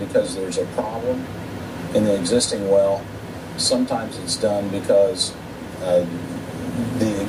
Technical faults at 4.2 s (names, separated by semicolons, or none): none